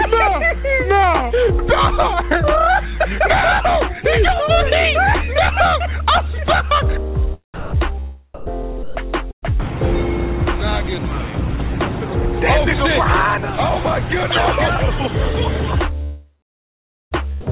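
The audio comes through a narrowband call path, which fits G.711 mu-law with nothing above 4 kHz. Three short spots, 7.54 to 7.72 s, 8.34 to 8.46 s and 8.83 to 8.95 s, swap the sound for a flat, steady comfort-noise bed for 120 to 180 ms each. This is most likely sound dropped by the voice detector, which mistook live audio for background and stopped sending. At 9.31 to 9.51 s there's a burst of packet loss. About 120 ms of audio is missing, and the receiver smears the last sound forward before it fades into roughly 100 ms of silence. The audio then resumes a little further on. The big one is 16.03 to 17.14 s, likely a long network dropout where about 1.08 s never arrives. A fading continuation of the last sound gives way to around 0.84 s of silence before the audio picks up again past the gap.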